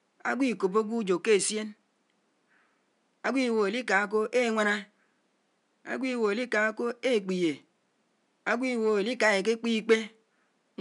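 No technical faults are audible.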